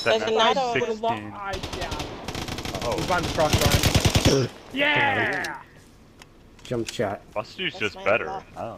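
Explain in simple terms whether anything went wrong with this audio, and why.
Between 2.56 and 4.98 seconds, a run of ticking or popping cuts across the sound, roughly fifteen clicks at about 5.4 per second, spaced unevenly and reaching about the same loudness as the sound itself. This is a train of clicks: something kept injecting short pulses of much the same shape for those couple of seconds. The likely source is outside the recording, such as interference from nearby equipment or a faulty connection or power supply.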